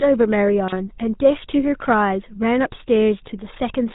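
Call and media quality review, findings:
GSM full-rate codec, whole clip: buzzy, gravelly speech, nothing above 4 kHz. Fits the 13 kbps full-rate vocal-tract model driven by sparse regular pulses that discard two of every three excitation samples. Damage plainly audible.

GSM bit errors, 0.67–0.75 s: brief squawk/gargle burst. Probable radio-link corruption reaching the speech decoder, bending spectral shape or spiking level over roughly three frames' worth of audio.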